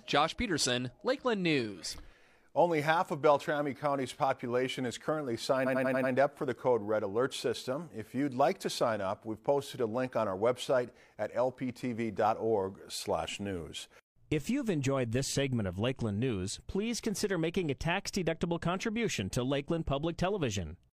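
A 93 ms block of compressed frames, fitting two frames, was written five extra times: repeated frames stutter from 5.62 to 6.09 s, adding 0.46 s.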